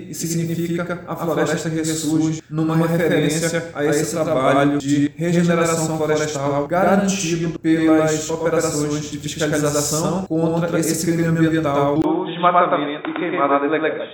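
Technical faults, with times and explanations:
12.02 to 14.14 s, input switched to a poorer device: after a 20 ms gap, the sound turns dull and boxy, with nothing above 3.8 kHz and a faint new noise floor but similar loudness, likely a fallback microphone. The spectrogram shows a sharp upper ceiling; the waveform shows a brief flat dropout.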